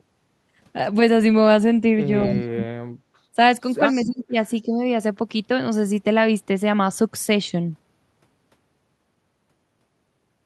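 A speech recording in which the voice dips or nearly vanishes at 2.24–3.01 s (drops of around 40 dB), 3.33–3.38 s, 4.02–4.35 s and 4.65–4.80 s. This is likely speech suppressed in double talk, with the echo canceller ducking the talker while the far side speaks. An echo leak, a faint repeat of the voice delayed by 244 ms and roughly 15–20 dB quieter, sits at 2.34–2.42 s and 3.89–4.24 s. It is likely loudspeaker pickup that got past cancellation, and the fixed delay separates it from room reverb.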